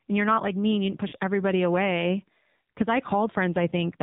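From start to end, the speech passes through an AMR narrowband mobile codec. Nothing above 4 kHz survives, so the sound is thin and boxed in. The voice has a buzzy, synthetic edge, plainly audible, which points to a low rate near 7.4 kbps.

At 1.08 to 1.15 s come lost AMR speech frames. The decoder had no valid data, so it reused the last good pitch and vocal tract settings at falling gain. The sound smears and sags briefly, a gap of about 40 ms, which fits two lost 20 ms frames.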